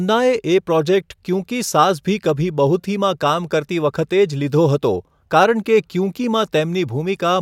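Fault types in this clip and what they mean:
Nothing stood out on listening to this speech recording.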